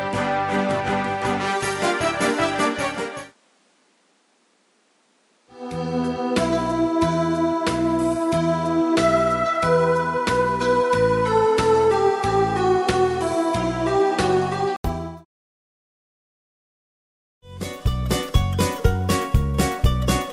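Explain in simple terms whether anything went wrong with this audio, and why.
For the first 14.8 seconds, the sound is duller, with nothing above 11.4 kHz and a faint extra hiss. A brief 80 ms gap follows, then it clears up at similar loudness. This is likely an input switched to a poorer device, such as another microphone.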